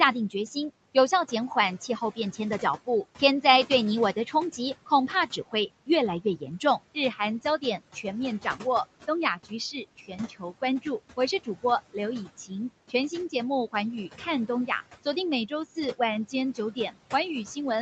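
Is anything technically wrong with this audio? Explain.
Yes. Two related faults come from the noise suppressor, heard over steady room noise sitting about 18 dB below the speech and a band that stops at 8 kHz, which fits a wideband Opus call at around 40 kbps.

Noise suppressor artifacts, throughout the clip: the suppressor estimates which frequency bands hold steady noise and pulls them down frame by frame, here by about 17 dB. Because that gain keeps changing, the background dips in the gaps and swells back under the speech.

Speech cut by the noise suppressor, from 1.28 to 3.44 s, 4.27 to 8.62 s and 9.44 to 16.93 s: in these stretches the suppressor mistook quiet parts of the speech for noise and attenuated them with the background. The drops reach about 15, 16 and 17 dB respectively, adding up to roughly a sixth of a second, half a second and a full second. Soft consonants and trailing word endings sound swallowed or faint.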